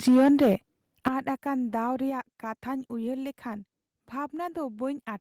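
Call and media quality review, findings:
Microphone overload, 0.07–0.54 s: harsh, crackling edge on the loudest speech peaks, about 7 dB past the converter's limit, roughly a fifth of samples flattened. Likely input gain set too high, so the converter cuts off peak tops.

Microphone overload, 1.06–1.08 s: brief crackle, about 3 dB over, a small share of samples clipped. Same converter ceiling hit on a shorter peak, likely from excess mic gain.

Microphone volume stepped down, 0.08 s: speech and background both drop abruptly by about 4 dB, inside the distorted stretch. Likely call software's gain control reacting to clipping by lowering device input volume in one step.

Microphone volume stepped down, 1.08 s: sudden level drop of about 11 dB right after the clipped peak. Likely automatic gain control cutting mic input hard.

Microphone volume stepped down, 2.10 s: further drop of about 4 dB just before "ᱠᱟᱛᱷᱟᱧ ᱩᱭᱦᱟᱹᱨ ᱞᱮᱠᱷᱟᱱ". 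Likely another single-step input reduction by the software.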